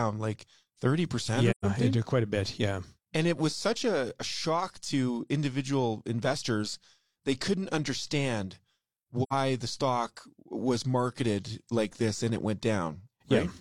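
At 1.50 to 1.65 s and again at 9.23 to 9.33 s, the speech drops into silence from AAC frame loss with muting. Gaps of about 128 ms and 85 ms fit three and two lost frames, zeroed by the decoder. Overlapping windows fade the edges, so unlike a hard dropout each gap is a soft-edged hole.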